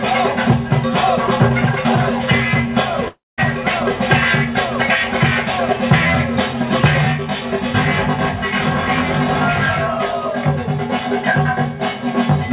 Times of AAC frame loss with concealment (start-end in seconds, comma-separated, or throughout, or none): none